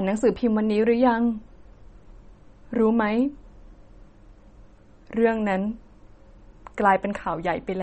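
Throughout, likely MP3 compression running short of bits, which fits about 32 kbps, removes everything above 8.4 kHz, leaving the speech dull and audibly watery.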